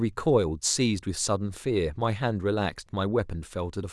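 No faults are audible anywhere in the speech recording.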